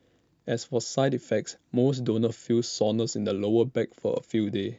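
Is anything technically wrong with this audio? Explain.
No, nothing technically wrong can be heard anywhere in this speech recording.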